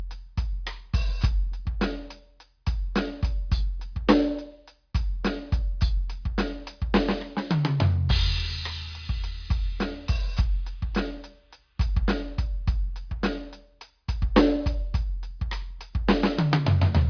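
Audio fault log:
No faults detected in this music recording.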